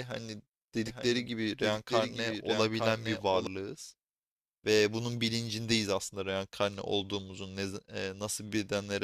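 From 0.87 to 3.47 s a second copy of the speech trails about one second behind, a few decibels quieter. This doubled audio track is likely a slower duplicate capture path.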